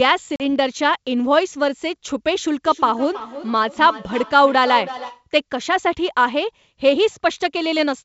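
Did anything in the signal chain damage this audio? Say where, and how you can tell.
Yes. At 0.36 s a hard-edged hole of silence cuts into the speech, and when it resumes at 0.42 s it comes back with some roughness that settles over a few tens of milliseconds. This is packet loss on an ADPCM call, at the network stage. About 40 ms of audio went missing, which fits roughly two packets. Because ADPCM codes differences from a running prediction, the receiver's predictor and step size no longer matched the sender's when the audio resumed.

From 2.66 s to 5.26 s each word comes round again about 0.3 s later, thinner and more ringing each time. The strongest repeats reach about 13 dB below the direct speech. This is feedback echo between two devices, a fault in call processing and the room. Two devices in the same room were on the call, and each microphone picked up what the other device played. 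Each device's echo canceller only removes its own playback, so the loop went unsuppressed.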